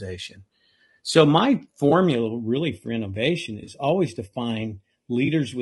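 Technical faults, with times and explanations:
Throughout: low-delay AAC compression. The speech sounds rough and grainy, with a hiss filling the gaps between harmonics and a thin, synthetic top band, likely from AAC-ELD at a low bitrate around 32 kbps. On a spectrogram, harmonics look smeared and the space between them is noisy.
1.89–1.92 s, 3.63–3.70 s and 5.25–5.28 s: AAC frame loss with concealment. Brief smeared, phasey patches of 20, 40 and 20 ms, fitting one, two and one lost frames, where the decoder refilled the gap from the last good spectrum. A spectrogram shows blurred, noise-textured slices with no sharp onsets.
2.15 s to the end: channel delay (comb filtering). One channel runs a fraction of a millisecond late, and summing to mono cancels shared content at evenly spaced frequencies, the first near 1.5 kHz. The speech turns hollow and phasey, with fixed dark notch stripes across the spectrogram.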